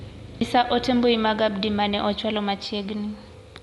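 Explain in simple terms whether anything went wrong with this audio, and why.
A tiny tick at 0.40 s, with the speech suddenly carrying on from a different point, is a CD skip. A knock or a flaw on the disc made the laser jump to another turn of the disc's spiral track. The player went silent for a split second and then resumed from the new spot. That moment of silence produces the tick, and the jump leaves a gap or repeat of a fraction of a second.

Throughout the clip the speech sounds dull and muffled, with nothing above about 11.4 kHz. There is also a rough, fluttering grain clinging to the sound, and this damage is plainly audible. This points to Dolby Digital compression at a low setting as the likely cause. To save space, the encoder dropped the top of the sound altogether and stored much of the remaining detail only as a rough outline. On playback, the decoder filled those gaps with noise, which is the graininess you hear.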